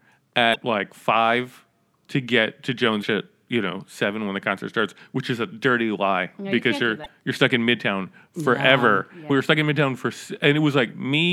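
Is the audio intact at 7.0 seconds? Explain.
No. Damaged data in the compressed stream at 7.02 to 7.06 s makes the decoder lose frame sync and hunt for the next header, producing a brief chirp, squawk, click or short hole.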